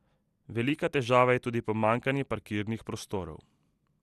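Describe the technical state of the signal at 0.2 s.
At 0.2 s the speech is dull and gurgling, as it is throughout: nothing above 12.2 kHz, with upper sub-bands flickering and a granular grain from coarse quantisation, likely MP2 compression at a low bitrate near 80 kbps. A plain low-pass filter would be dull without that warbling grit.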